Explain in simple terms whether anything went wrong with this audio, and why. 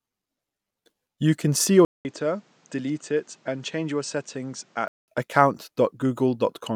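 Right after "can see your" at 1.85 s there's a brief gap. Then the speech sounds quieter, duller and noisier until 5.08 s, likely an input switched to a poorer device.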